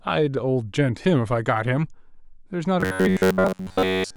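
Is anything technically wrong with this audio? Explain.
Yes. From 2.81 s to the end at 4.17 s, the speech becomes robotic sound from repeated short buffers: a rigid, metallic 93.8 Hz buzz. Looping one 10.7 ms chunk likely replaced roughly 70 percent of the audio. Spectrograms show flat, evenly spaced harmonics; the waveform shows identical repeating cycles.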